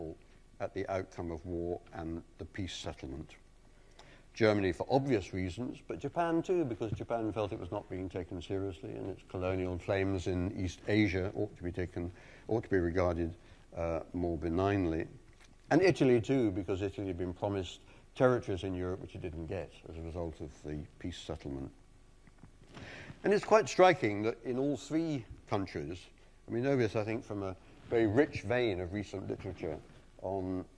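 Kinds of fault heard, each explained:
Nothing stood out on listening; no fault of any kind was heard anywhere in the clip.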